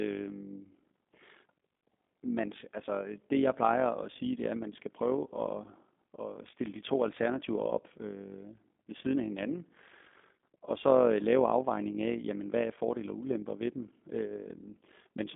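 Speech runs through a G.729 codec for its whole length. Nothing survives above about 3.6 kHz, and a rough, synthetic quality, which simple telephone band-limiting would not add, points to 8 kbit/s coding.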